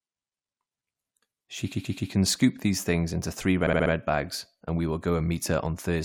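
From 1.72 to 2.10 s, just before "can scoop these things", repeated frames make a 128 ms block play three extra times, consistent with a short run of compressed frames being duplicated. It stutters and adds 384 ms. At 3.66 to 3.91 s, between "these things into three" and "bags and we will", a 64 ms block repeats four more times, adding 256 ms as a faster stutter.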